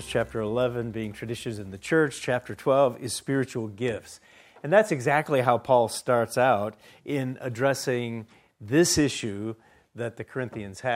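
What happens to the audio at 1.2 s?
Nothing goes wrong at 1.2 s; the audio plays through that moment intact, with no dropout, click or other disturbance.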